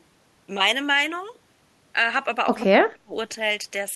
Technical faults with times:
2.59-2.66 echo leak
2.64-3.13 speech suppressed in double talk

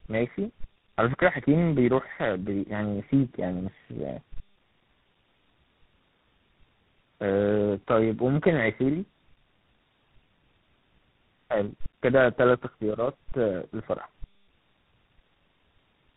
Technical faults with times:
0.00-16.17 tandem speech coding

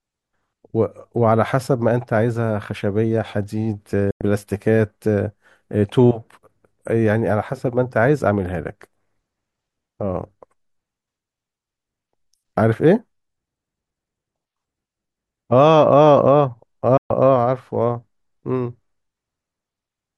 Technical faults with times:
4.11-4.21 digital broadcast dropout
16.97-17.11 digital broadcast dropout

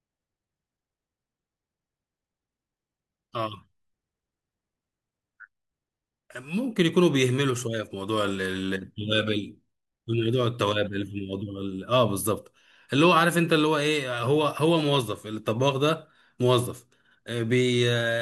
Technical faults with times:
none

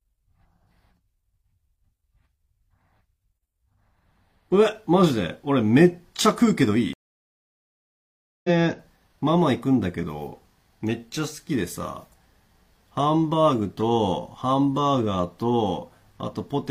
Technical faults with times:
6.93-8.50 stream reconnect

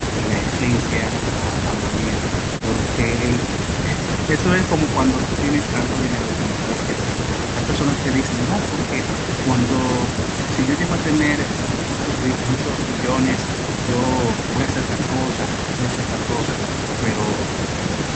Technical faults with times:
none

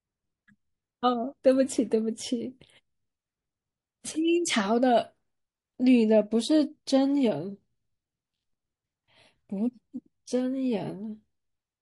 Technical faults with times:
0.00-11.81 MP3 compression
4.01-4.04 pre-echo

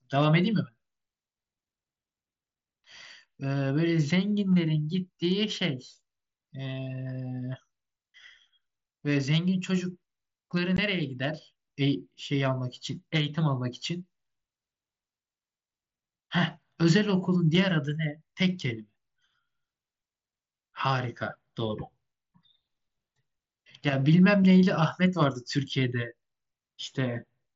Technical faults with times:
10.77 unconcealed Bluetooth headset packet loss

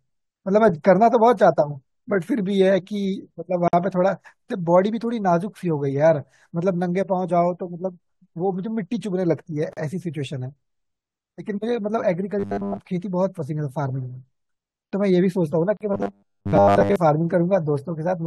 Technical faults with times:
3.68-3.73 gap at a join of encoded pieces
9.73-9.77 gap at a join of encoded pieces
12.39-12.80 robotic sound from repeated short buffers
15.77-15.81 gap at a join of encoded pieces
15.94-16.96 robotic sound from repeated short buffers

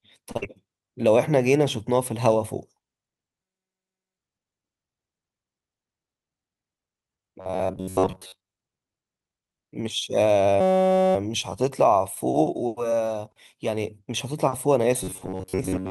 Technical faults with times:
0.31-0.37 short stall from a late packet
0.37-0.44 burst of packet loss
7.41-8.49 robotic sound from repeated short buffers
10.61-11.15 system hang loop
15.03-15.90 robotic sound from repeated short buffers

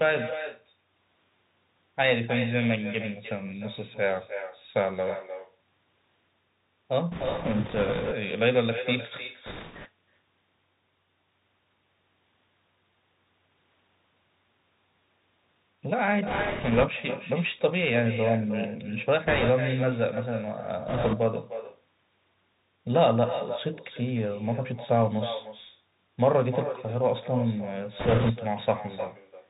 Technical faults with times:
0.00-29.50 echo with no canceller
0.00-29.50 Bluetooth CVSD headset codec
7.11-8.13 bit errors on a Bluetooth voice link
9.46-9.88 bit errors on a Bluetooth voice link
16.27-16.86 bit errors on a Bluetooth voice link
19.27-19.50 bit errors on a Bluetooth voice link
20.88-21.16 bit errors on a Bluetooth voice link
27.99-28.32 bit errors on a Bluetooth voice link

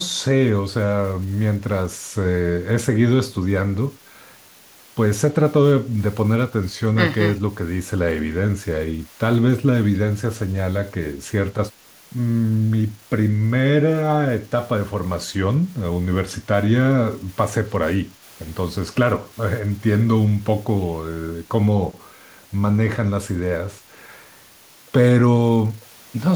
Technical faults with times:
5.83-5.94 speech suppressed in double talk
18.04-18.22 speech suppressed in double talk

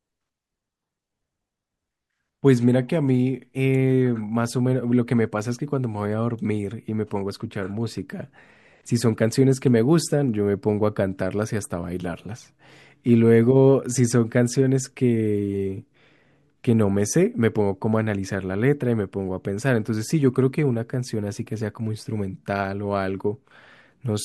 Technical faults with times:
none

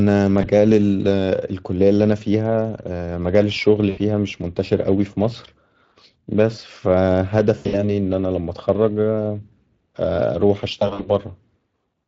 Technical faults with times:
0.00-12.07 Speex codec
0.41-0.46 VoIP packet loss concealed by the speech codec
3.89-3.99 VoIP packet loss concealed by the speech codec
7.57-8.00 VoIP packet loss concealed by the speech codec
10.79-11.10 VoIP packet loss concealed by the speech codec

